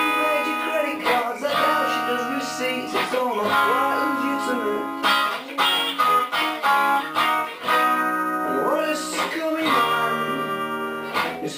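Nothing stood out as a technical problem on listening.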